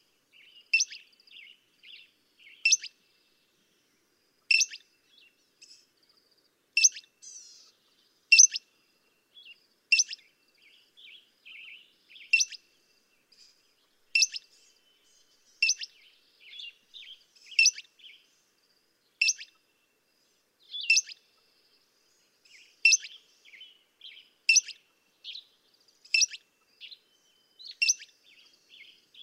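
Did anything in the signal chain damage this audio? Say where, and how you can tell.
Yes, at the codec or storage stage: repeated frames. At 4.53 s and 8.43 s a 32 ms slice of audio plays twice, heard as a brief stutter. At 11.63 s a longer 128 ms block repeats once, giving a longer stutter. A run of compressed frames was written or delivered twice, and the decoder played it again. The 32 ms unit fits single codec frames, and each repeat adds its length to the running time.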